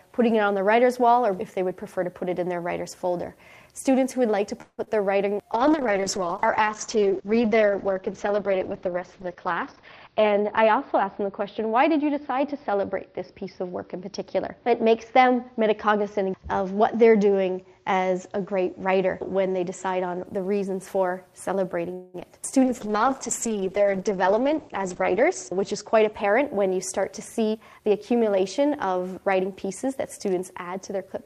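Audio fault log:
4.61–4.80 s and 21.94–22.16 s, call audio freeze: The sound stalls and the last moment is stretched into a fading buzz. The first stall lasts about 0.17 s and drops into a brief silence of about 40 ms. The second lasts about 0.2 s with no silence. The cause is likely packets held up in transit, so the jitter buffer ran dry. Playback then resumes where it stopped. Nothing is lost, but the stream now runs later by the length of each stall.
4.84–4.89 s and 22.20–22.23 s, short concealed packet loss: Just after each freeze, about 20 ms of audio never arrives in time. The receiver fills the hole by extending the preceding sound, about 24 ms of fill in the first case and 10 ms in the second. It then blends back into the real signal. The result is a tiny smear or wobble.
5.53–20.32 s and 22.65–26.75 s, call bitrate drop: The encoder's budget falls from 40 kbps to 8 kbps in the first span and to 9 kbps in the second. 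The bandwidth narrows from 20 kHz to 6 kHz and 8 kHz respectively. Coarser coding makes the sound rough and watery. The lost top end makes it muffled. The worst stretch lasts about 4.2 s in the first span and 2.7 s in the second. Quality then climbs back.
9.57–11.29 s, 15.27–15.98 s, 24.11–26.48 s and 26.97–27.89 s, jitter buffer speed-up: After a backlog builds up, the receiver trims short pitch-period slices to cut the delay. Playback runs about 6%, 7%, 5% and 6% fast in these spans. The pitch stays the same. Roughly a tenth of a second is removed in the first span, half that in the second, about 0.15 s in the third and under 0.1 s in the last. The sound feels slightly hurried.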